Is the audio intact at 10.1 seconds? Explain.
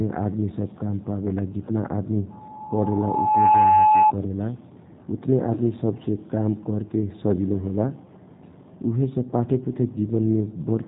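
No. At 10.1 seconds the speech carries G.729 codec damage, which runs through the entire clip rather than appearing as a local event. The coder rebuilds each 10 ms frame from a vocal tract filter, a pitch predictor and a sparse set of pulses, consistent with an 8 kbit/s low-rate VoIP coder. The result is plainly audible: a rough, slightly synthetic texture, with nothing present above 3.8 kHz, so sibilants sound dull.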